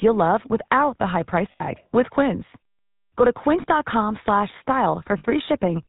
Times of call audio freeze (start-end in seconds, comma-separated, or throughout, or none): none